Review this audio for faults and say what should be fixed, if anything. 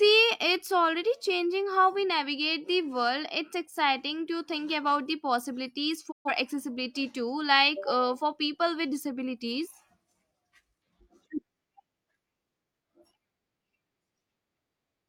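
There's one fault worth fixing: a digital broadcast dropout from 6.10 to 6.31 s. The speech fades out over about 20 ms and goes silent, so the receiver evidently lost the signal or hit frames that failed their checks and muted until clean frames arrived. Around 130 ms of programme is simply gone, which fits roughly three lost frames, and it can't be recovered from this copy. To prevent it, improve reception margin or use a source with error protection or redundancy.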